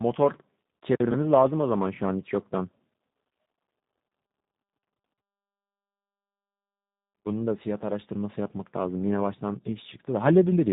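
Tandem speech coding runs through the whole clip: the speech passed a CVSD link, then G.711 mu-law, then G.729A, so two speech coders worked in turn, the second re-coding the first's damage. Nothing survives above 3.8 kHz, and the speech sounds muffled, rough and warbly.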